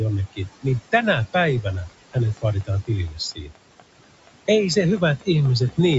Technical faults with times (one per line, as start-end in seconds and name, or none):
0.00-5.98 noise suppressor artifacts
0.33-0.66 speech cut by the noise suppressor
1.67-5.94 train of clicks
2.65-3.57 speech cut by the noise suppressor